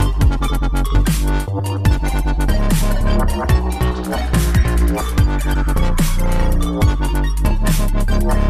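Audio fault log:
3.00 s, 5.53 s: compressed frames skipped. About two 23.2 ms frames are dropped, so the sound jumps ahead roughly 50 ms. Overlapping frames smear the join into a brief blip, visible as a thin vertical smudge on the spectrogram.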